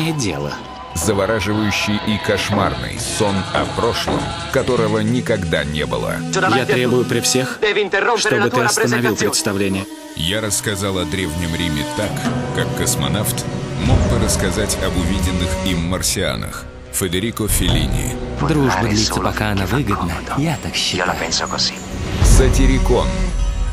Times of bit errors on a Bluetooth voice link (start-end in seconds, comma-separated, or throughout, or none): none